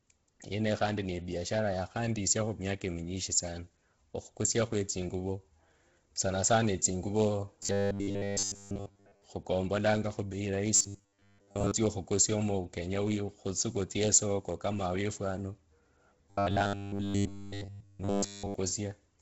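From start to finish the speech carries a breathy, grainy edge. This is heavy Bluetooth LC3 compression, likely from a low-bitrate LE Audio link, something near 16 kbps with 10 ms frames. The codec discards much of the upper spectrum and patches it with noise. On a spectrogram, the upper bands look speckled and blocky rather than smoothly textured.

From 7.63 to 9.24 s, again from 10.76 to 11.72 s, and from 16.30 to 18.54 s, the voice collapses into a rigid metallic buzz at 100 Hz. This is robotic sound from repeated short buffers, likely caused by audio arriving too slowly, so the same 10 ms slice is played over and over while fresh audio is skipped. In the first two stretches most of the signal is repeated, and in the last stretch all of it is. A spectrogram shows evenly spaced harmonic lines on a 100 Hz grid, and the waveform shows identical cycles repeating every 10 ms.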